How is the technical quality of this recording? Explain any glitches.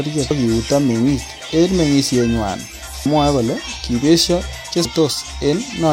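The recording has three skips where the audio jumps forward. They come at 0.30 s, just before "kiuto meng'ik en meng'isienywan", again at 3.06 s right after that phrase, and at 4.85 s. These are compressed frames skipped: a run of frames never got decoded, so each time roughly a third of a second of speech drops out, which fits about ten 32 ms frames going missing.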